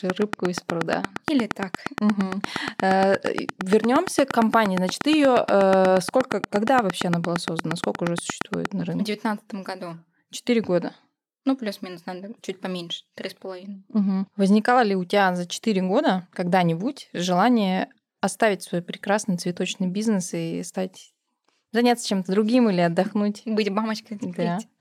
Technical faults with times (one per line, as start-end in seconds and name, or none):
0.10-8.66 train of clicks